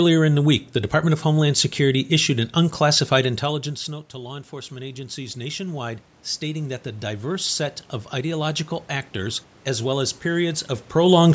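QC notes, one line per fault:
3.44 to 7.59 s, automatic gain rising: just after "issued an unclassified", the voice and the room noise behind it swell together, climbing slowly over about four seconds. Around 3 s the talker moves away and the level reaching the microphone drops by about 17 dB. The gain control reads that as too quiet and ramps its gain up by about 8 dB, lifting the background along with the voice and recovering only part of the loss.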